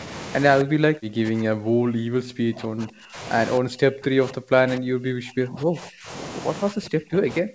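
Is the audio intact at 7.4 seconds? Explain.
No. From 6.7 s to the end of the clip, including 7.4 s, the talker's speech sinks and breaks up, falling by roughly 40 dB at its deepest, so stretches nearly vanish. This is speech suppressed in double talk, and the likely cause is the echo canceller mistaking the near talker for loudspeaker echo while both sides spoke together. Unable to separate the two, it attenuated everything, taking the wanted speech down along with the echo.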